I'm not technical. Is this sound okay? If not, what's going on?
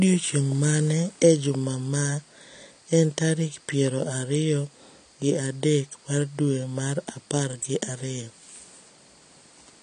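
No. The speech sounds dull and smeared from start to finish, with nothing above 10 kHz, likely from heavy AAC compression squeezing the file too small.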